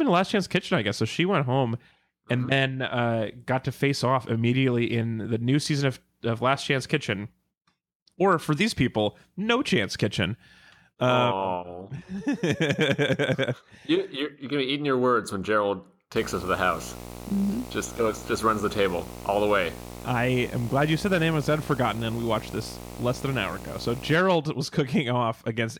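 From 16.16 to 24.16 s, video or display buzz intrudes on the speech: a 60 Hz field-rate buzz with hash, roughly 15 dB below the signal, showing as stacked harmonic lines on a spectrogram.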